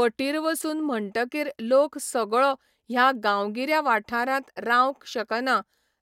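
No technical faults can be heard in this speech recording.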